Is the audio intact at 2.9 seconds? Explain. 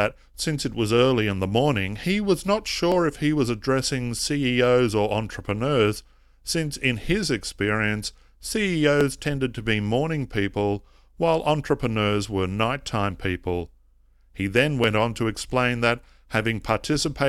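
No. At 2.92 s, between "morning he was not" and "if he was addressing", a sharp click marks dropped samples, likely a fraction of a millisecond removed, making the waveform jump.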